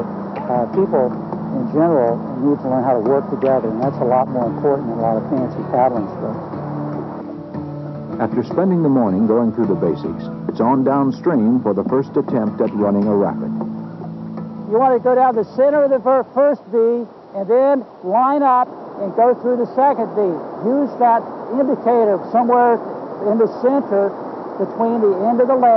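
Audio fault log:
Nothing to log here, as there's no fault anywhere in this clip.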